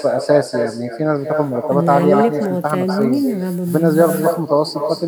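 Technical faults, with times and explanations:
Throughout, echo with no canceller: each phrase of speech returns roughly a fifth of a second later, about 7 dB quieter and thinner, because the far end's loudspeaker feeds its microphone and nothing removes that pickup before the network carries it back.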